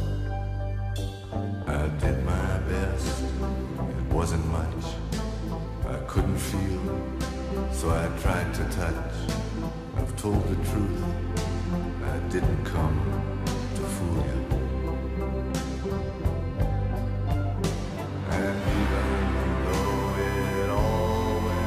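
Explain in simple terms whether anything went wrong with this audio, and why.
USB whine appears from about 19.68 s until the clip ends at 21.67 s: a steady, fixed-pitch tone at 1 kHz, fairly loud against the main sound. A USB connection draws power in quick bursts a thousand times a second, and that pulsing leaked into the audio through the power or ground wiring. Because the bursts keep a fixed rhythm, the leak is heard as a constant high whine rather than random noise.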